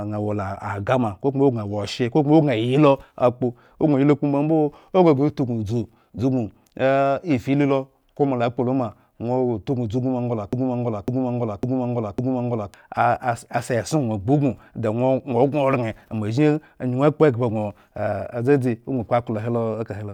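A speech recording with a broken-record loop from 10.53 s to 12.74 s: a fragment about 0.55 s long plays four times back to back, so whatever should have been heard across those 2.2 s never arrives. The likely cause is a stalled player, encoder or stream that kept resending the last fragment it held. On a spectrogram this shows as four identical blocks side by side, and the waveform repeats exactly at a 0.55 s period.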